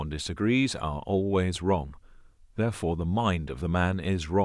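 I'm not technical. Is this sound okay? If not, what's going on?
Yes, nothing stood out as a problem when listening to this recording.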